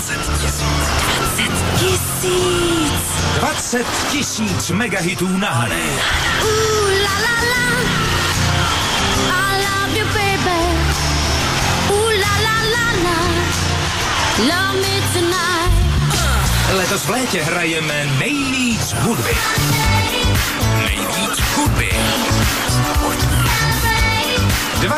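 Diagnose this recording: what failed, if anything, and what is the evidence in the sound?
A drift correction step shows up twice, from 7.26 to 7.97 s and from 16.43 to 17.18 s. In each case the sound speeds up by about 6.2 percent and rises about 103 cents, roughly a semitone, then snaps back to normal rate and pitch. The cause is likely clock-matching software at the buffer stage changing the playback rate in one jump to drain its buffer, instead of correcting drift gradually.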